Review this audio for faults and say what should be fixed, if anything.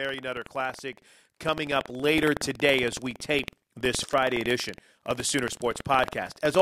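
Buffer tearing runs through the whole recording as a steady rattling buzz at about 21.5 Hz, present only while there is sound. The application filling the ring buffer and the hardware draining it have drifted out of step and meet inside each period. A small slice of every buffer, roughly 2 percent, is audio from about a tenth of a second earlier, hard-spliced on both sides, and the rate fits a 2048-sample buffer. To prevent it, keep the writer's position locked a safe margin ahead of the hardware read pointer, recovering from underruns rather than letting the two drift.

Microphone volume stepped up at 1.02 s, just before "coming up", by about 6 dB, and again at 2.04 s, between "coming up" and "today as we", by about 4 dB. At each point the voice and the background noise jump in level together. The call software judged the input too quiet and raised the device's capture volume in a single step instead of easing it. 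To prevent it, disable automatic input-gain adjustment and set the microphone level once before recording.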